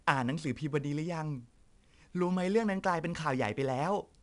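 Speech with 4-bit ADPCM compression throughout: a gritty hiss follows the level of every loud passage and roughens sharp onsets. A spectrogram shows broadband noise smeared between harmonics on loud stretches and an empty band above 10.7 kHz, which fits roughly 89 kbps.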